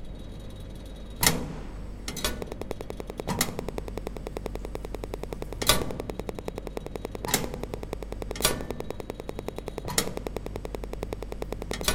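An everyday sound recording with a train of clicks from 2.42 s to 11.92 s. About ten sharp, evenly spaced clicks arrive each second, around a hundred in all. They peak roughly 15 dB above the sound. Nearby equipment interference or a faulty connection or power supply is the likely cause.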